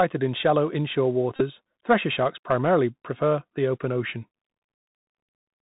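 Speech clip carried throughout by the Bluetooth CVSD headset codec: nothing above 4 kHz survives, s sounds are scratchy, loud peaks distort and granular hiss sits underneath, which fits a 64 kbps link. Between "in shallow inshore" and "thresher sharks primarily", at 1.36 to 1.42 s, Bluetooth headset packets are repeated: lost packets were replaced by the previous one again, leaving a buzz near 267 Hz over about 30 ms, consistent with roughly ten dropped 3.75 ms packets.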